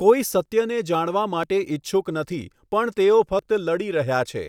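Audio missing between chunks: processing likely in 1-second chunks drops about 20 ms at each join, so the speech skips abruptly at 0.46, 1.43, 2.41 and 3.39 s.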